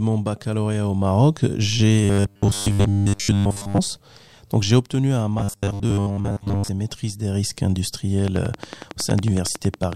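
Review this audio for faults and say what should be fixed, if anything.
Audio likely arrived too slowly at the playback buffer from 2.05 to 3.80 s and again from 5.39 to 6.69 s, between "j'ai obtenu un" and "et maîtrise des risques". The software kept replaying the last slice of about 10 ms while most of the real speech was skipped, producing robotic sound from repeated short buffers: a rigid, metallic 100 Hz buzz that only loosely tracks the speech. Larger jitter buffers and a steadier delivery path would prevent these underruns.

A train of clicks runs from 8.28 to 9.94 s, most likely from electrical interference or a faulty connection or power supply injecting pulses. About twenty near-identical clicks arrive at a regular 10.9 per second, peaking around 10 dB above the speech and heard as steady ticking. Shielding the cabling, moving nearby equipment away and checking the interface would stop it.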